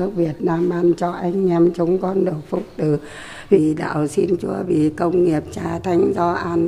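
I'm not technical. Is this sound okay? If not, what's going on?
Yes, this sound is okay, and there's nothing going on with it that needs fixing.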